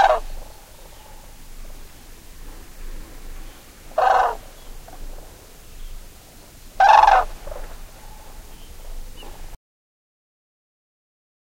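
The input feed to the recorder was most likely lost at about 9.55 s, through a disconnected device, a failed link or a stray mute, while the recording carried on writing silence. The result is an audio dropout to silence: the sound cuts out mid-flow and does not return, leaving the last two seconds or so, through to the end of the clip, completely silent with no room tone. Whatever sounds happened in that stretch are gone.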